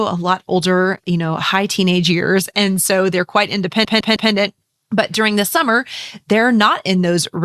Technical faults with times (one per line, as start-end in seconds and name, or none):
3.84-4.31 repeated frames